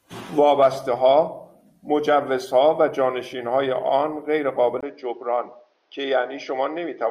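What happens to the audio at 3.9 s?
Nothing goes wrong at 3.9 s; the speech carries on intact through that moment, with no dropout, click or distortion.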